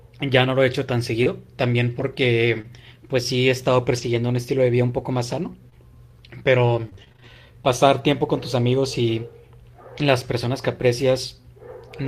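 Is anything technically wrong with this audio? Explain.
Yes. Between 1.23 and 7.30 s the speech carries brief ticks, smears and hiccups, the marks of scattered short gaps: about ten small dropouts, none much over 20 ms, where lost or late packets were patched by stretching the preceding sound across each hole.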